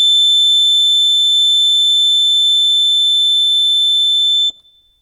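The music contains no audible technical faults.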